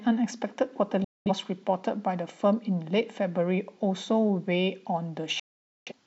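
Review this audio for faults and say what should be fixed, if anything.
Digital broadcast dropouts mute the speech at 1.04 to 1.31 s and 5.39 to 5.92 s. The receiver lost frames and silenced them with a 3 ms fade. Improve reception or add error protection.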